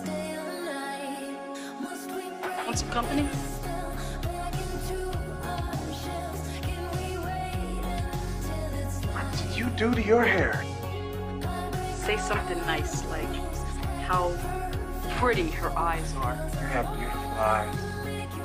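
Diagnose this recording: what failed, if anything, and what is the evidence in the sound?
Nothing failed; the sound offers no evidence of a fault at any stage.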